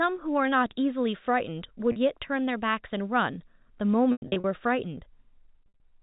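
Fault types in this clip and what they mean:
Packet loss with pitch repetition: bits of the stream went missing, and the receiver bridged each gap by looping the last pitch period and fading it down. At 1.92 s the 40 ms gap just comes across as a briefly held, buzzy note. From about 4.12 to 4.44 s and 5.64 to 5.80 s the losses are scattered, with runs up to 100 ms, so the loop fades to silence before the speech cross-fades back over the G.711 telephone band.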